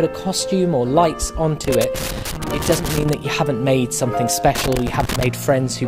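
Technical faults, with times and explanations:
1.64–3.14 s and 4.55–5.27 s: loose connector crackle. A worn or dirty contact intermittently breaks the signal path, producing irregular bursts of scratching crackle.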